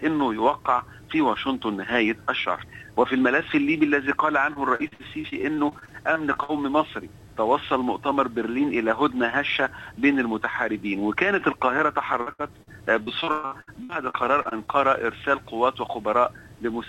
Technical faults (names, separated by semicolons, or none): repeated packet loss (robotic sound)